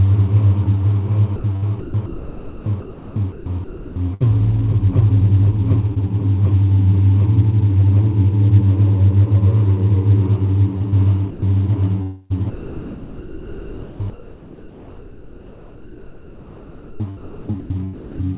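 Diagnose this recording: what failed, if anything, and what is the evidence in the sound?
The call-processing stage is where most of this goes wrong. From 1.36 to 4.22 s, briefly at 10.78 to 10.94 s, and again from 12.02 to 18.25 s, the sound is chopped by the voice detector. Stretches keep cutting out and getting swapped for flat synthetic hiss, about 1.8 s in the first span and about 5.4 s in the last. The sender's detector likely kept flipping between send and comfort noise. The whole thing sits under 4 kHz, which fits G.711.

There's a short concealed packet loss on the network side at 5.94 s. You hear a tiny smear rather than a hard gap, since about 20 ms of audio didn't arrive in time. The receiver covered it by stretching the preceding sound forward for roughly 18 ms and then blending back into the real signal. It's definitely there.

Sound is dropped by the voice detector at 11.30 to 11.42 s, again in call processing. 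For about 120 ms the actual audio vanishes completely and steady comfort noise sits in its place until sending resumes. This differs from the choppy spans because it's a single clean hole rather than repeated flickering. The likely cause is that the detector judged a quiet bit of real sound to be background and simply stopped transmitting it.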